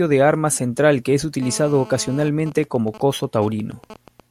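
Speech, interrupted from 1.42 to 2.29 s by a hard, raspy buzz at 217 Hz, rich in harmonics and about 19 dB below the speech. It holds steady and bears no relation to the talking. This is GSM phone buzz: a nearby 2G phone in an active call transmits in bursts 217 times per second, and the audio circuitry rectifies those radio pulses into sound. From 2.40 to 4.20 s even ticks with a longer 217 Hz buzz twice a second follow, roughly 20 dB down. These are GSM signalling bursts from a nearby 2G phone during a call while its user was silent, sending only short groups of bursts that the circuit again rectifies.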